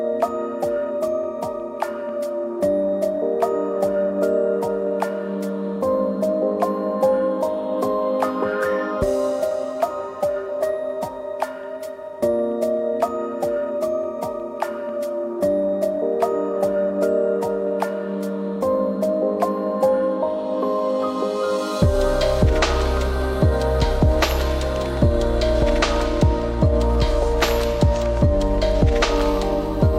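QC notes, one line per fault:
Nothing to flag here; I couldn't hear anything worth a note anywhere in the clip.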